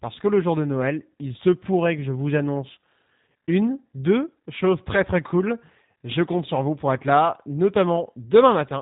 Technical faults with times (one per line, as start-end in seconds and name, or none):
0.00-8.81 G.729 codec